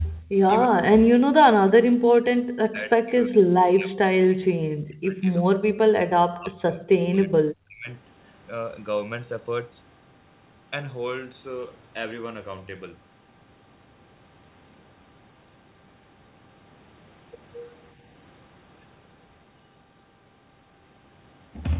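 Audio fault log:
0.04–0.13 s, echo leak: A faint delayed copy of the talker surfaces about 346 ms after the original, sitting roughly 30 dB below the voice. This is likely loudspeaker pickup at the far end that its echo canceller failed to fully remove.
0.22–0.40 s, background gated by the echo canceller: The room sound suddenly sinks by up to about 26 dB for roughly 150 ms, then comes back. The canceller clamped the microphone hard while its loudspeaker was playing, then released it.
0.70–1.29 s, 1.59–6.84 s and 7.00–7.88 s, speech suppressed in double talk: The voice repeatedly dips, dulls or breaks up, falling as much as about 40 dB. The longest run lasts roughly 5 s. This is likely the echo canceller mistaking overlapping talk for echo and attenuating both.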